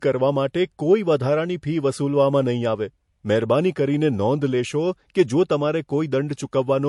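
From start to finish the speech has a hard ceiling, with nothing above about 11.3 kHz, plus a mix of different codec artefacts heard together. That combination is likely transcoding between lossy codecs. The sound points to an MP3 pass at around 48 kbit/s, and that pass was then re-encoded to AAC-LC at around 64 kbit/s. The AAC stage spent its bits on the old MP3 damage and added its own, while keeping the lowest cut-off in the chain.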